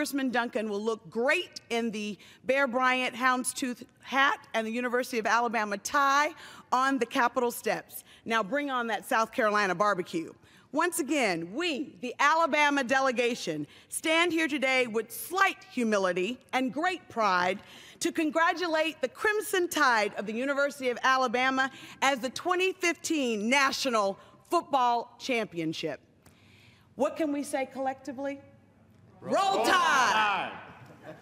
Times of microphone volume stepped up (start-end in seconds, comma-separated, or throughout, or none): none